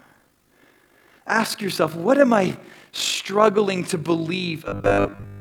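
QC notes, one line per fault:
Throughout: overlap-add ripple. A fast, rough flutter sits on the whole clip, like a robotic tremolo pulsing around 50 times a second, with the level dipping and recovering by about 6 dB on each cycle. The audio was split into windowed frames and rejoined with an overlap whose windows do not add up to a steady gain. The level therefore swells and sags once per frame, and at that frame rate the fluctuation is heard as flutter rather than as separate bumps.
4.68 to 5.40 s: robotic sound from repeated short buffers. For the last stretch of the clip the speech hardens into a rigid, metallic buzz at 100 Hz. It still loosely tracks the syllables. The likely cause is fresh audio arriving too slowly, so the playback side keeps replaying the most recent 10 ms block to fill the gaps. Most of what is heard here is repeated material while the real audio is dropped, and that 10 ms loop length imposes the fixed 100 Hz buzz.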